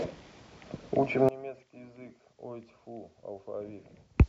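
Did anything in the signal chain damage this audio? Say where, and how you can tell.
Yes. From 1.29 s to the end at 4.28 s, the speech drops by about 23 dB to a faint residue, the signature of one channel inverted. With one side's polarity reversed, everything common to both channels cancels in the mono sum, taking the centred voice and low end with it. The likely cause is a swapped conductor pair in the analogue wiring. A dropout would leave silence, and a high-pass filter would remove only bass. Here a faint trace survives while the whole level collapses.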